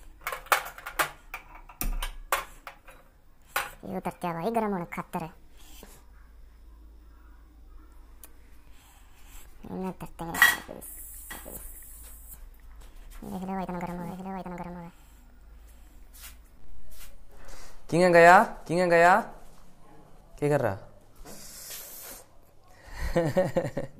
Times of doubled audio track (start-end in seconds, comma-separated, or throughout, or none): 11.31-20.21